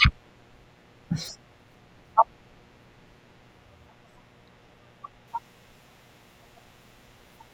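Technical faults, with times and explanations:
Throughout: mains buzz. A steady, raspy buzz sits under the speech for the whole clip, roughly 30 dB below it, built on a 60 Hz mains fundamental. Sharp switching spikes, such as those from a dimmer, a rectifier or an unshielded cable, get into the signal twice in each mains cycle. Because the spikes are so abrupt, they spread into a dense ladder of harmonics reaching well into the kilohertz range. That harmonic ladder makes the noise sound gritty rather than like a clean hum.
0.0 to 5.28 s: de-emphasis applied wrongly. For the first five seconds or so the speech sounds dull and muffled, as if heard through a blanket. A treble-cut curve meant to reverse pre-emphasis has been applied to audio that never had that boost, or has been applied a second time. The result is a smooth downward slope toward the highs, about 10 dB lower at 10 kHz than at 1 kHz. 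After 5.28 s the brightness returns.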